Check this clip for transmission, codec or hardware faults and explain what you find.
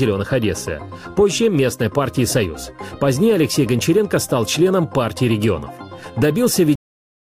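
One fault, a cut-off end at 6.75 s: the final buffers were never written, so the sound stops mid-event and drops straight to digital silence, with no decay.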